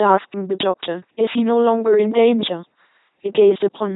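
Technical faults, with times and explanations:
Throughout: LPC-10 vocoder. The speech is rebuilt from a small all-pole filter driven by either a pulse train or noise, with each instant forced wholly voiced or unvoiced. That gives a heavily buzzing, robotic sound with nothing above 3.9 kHz, consistent with a 2.4 kbit/s codec.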